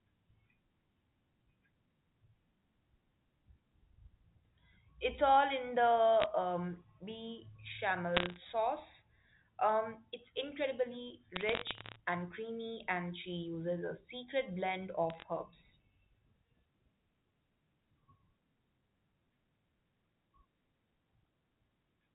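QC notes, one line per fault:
6.20–6.24 s, 8.17–8.36 s, 11.36–11.96 s (after "it's incredibly", before "and creamy and she"), 15.10–15.23 s (after "uses a secret blend"): bit errors on a digital phone line. These are bursts of sharp ticks and crackle over otherwise intact speech. Flipped bits on the G.711 mu-law path, at an error rate well under half a percent, corrupt individual samples. Hits on the sign or high-order bits produce the loudest clicks.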